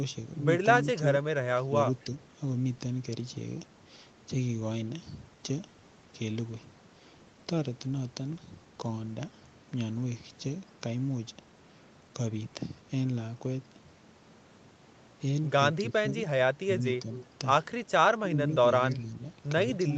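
Between 1.23 and 2.12 s the speech sinks in short patches, about 10 dB at worst and roughly a third of a second in total. This is speech suppressed in double talk, likely from the echo canceller turning the near talker down along with the loudspeaker echo while both sides spoke. Around 2.0 s a faint scrap of the voice returns about 35 dB down, 249 ms late: an echo leak, likely residue the canceller missed and sent back.

The same thing happens later and harder. From 15.78 to 17.08 s the voice drops by up to about 20 dB for around half a second altogether. Then from 17.14 to 17.25 s a clearer echo leak follows, about 20 dB below the speech and again delayed 249 ms.

Shorter, gentler double-talk dips come at 18.22 to 18.41 s, about 10 dB, and at 19.85 to 19.96 s, about 5 dB.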